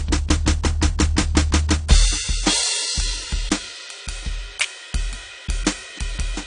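From start to finish the music sounds dull and smeared, with plainly audible AAC compression damage: sustained tones warble and sibilant textures turn fizzy. The likely cause is AAC-LC coding at a low bitrate, around 32 kbps, where the encoder lowers its cut-off and starves quieter bands of bits. A spectrogram would show a hard ceiling on the high frequencies, with patchy holes and blotchy noise-filled regions below it.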